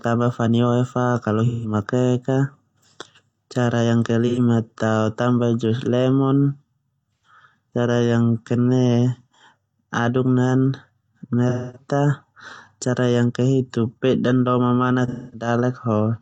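AAC frame loss with concealment occurs at 1.46 s after "fani oe fa kalau", 4.27 s after "cara yang ke", 7.15 s after "tao tambah jus lemon", 11.49 s and 15.08 s. The decoder fills each 85 to 256 ms gap from the last good spectrum, leaving a brief smeared, noisy or phasey patch.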